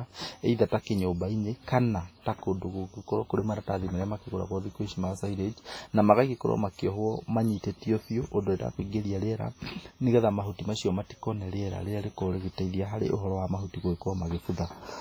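WMA compression damage runs through the whole speech clip, from start to finish. The speech sounds ringing and washy, with a hiss that swells and fades with the signal and weak detail dropped out. This is likely a transform codec at a very low bitrate, consistent with about 24 kbps.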